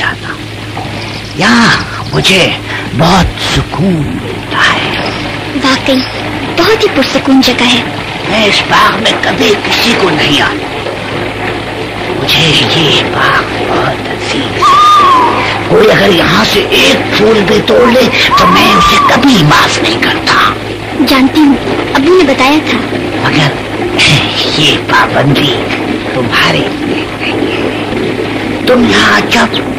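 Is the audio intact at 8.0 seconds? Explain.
No. Hard clipping runs through the whole clip, including 8.0 seconds: a stage overdriven by about 4 dB flattens peaks on roughly one sample in twenty, adding high harmonic distortion.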